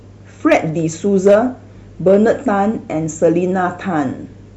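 Hard clipping at 0.52 to 0.57 s, 1.26 to 1.35 s, 2.08 to 2.31 s and 3.25 s in this speech: peaks overdriven by about 5, 3, 2 and 0 dB are cut flat, adding high harmonics heard as crackle.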